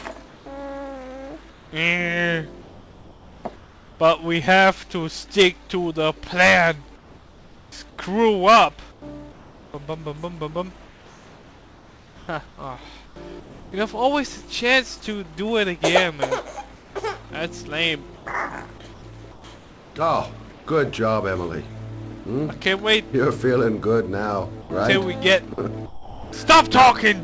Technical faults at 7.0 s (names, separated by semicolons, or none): comfort noise in place of the background